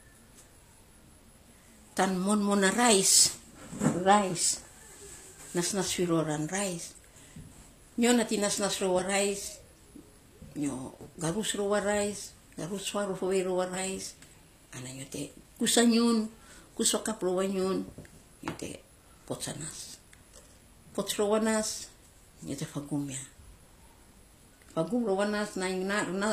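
Speech clip, likely passed through HE-AAC compression at a low bitrate, and the damage is plainly audible throughout. The codec seems to carry only the lower spectrum properly and synthesises the treble by copying lower bands upward, which fits a rate around 24 kbps. That rebuilt top end keeps some brightness, but its harmonics don't match those below the crossover, so sibilants come out gritty and metallic or lispy. Nothing remains above 14.9 kHz.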